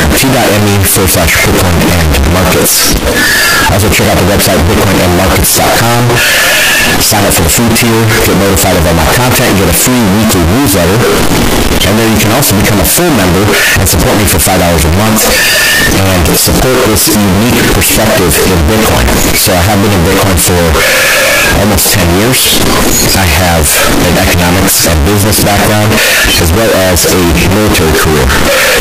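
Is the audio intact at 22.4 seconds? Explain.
No. At 22.4 seconds the speech carries a float-read-as-integer fault, which runs through the whole clip. The samples were likely stored as 32-bit float and decoded as 32-bit integers, so each value is set by the float's sign and exponent bits rather than its actual amplitude. The result is a near-square waveform sitting at an almost fixed, high level: very loud and harsh, with background noise as loud as the speech, though pitch remains traceable.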